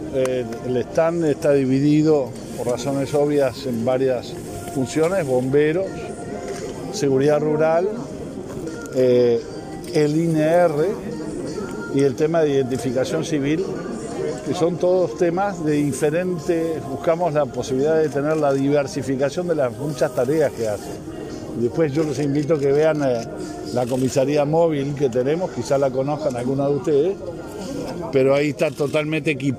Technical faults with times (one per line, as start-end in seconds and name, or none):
none